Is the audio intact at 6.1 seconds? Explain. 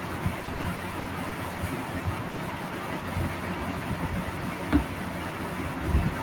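Yes, the audio is intact at 6.1 seconds, with no fault at that moment.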